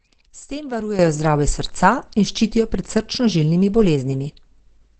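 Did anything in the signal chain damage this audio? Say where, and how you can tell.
Yes. From the start the speech sounds muffled and hoarse with nothing above 8.6 kHz, likely Opus compression in its speech mode at a low bitrate around 12 kbps.

At 0.99 s there's a sudden gain jump: speech and background leap about 11 dB together and stay up, likely a digital gain change applied without a ramp.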